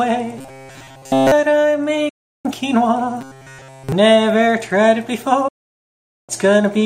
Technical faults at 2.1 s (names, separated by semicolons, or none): digital broadcast dropout